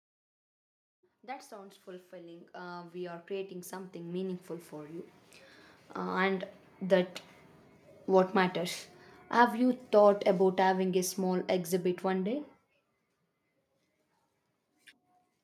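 A speech recording where automatic gain rising sets in from 1.21 s to 5.14 s: the gain control, judging the input too quiet, lifts the level by about 16 dB over nearly four seconds. The background noise swells with the voice, unlike a talker moving closer.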